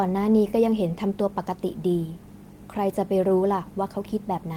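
No technical faults can be heard in this speech.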